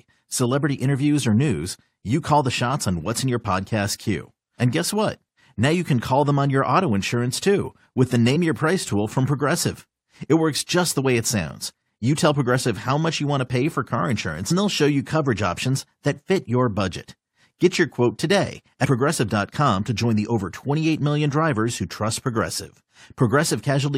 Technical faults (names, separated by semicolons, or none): damaged data in a compressed stream